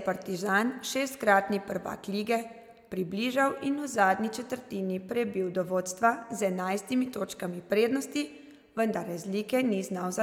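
Nothing in this bit of speech trips anything up; there's just nothing here to flag.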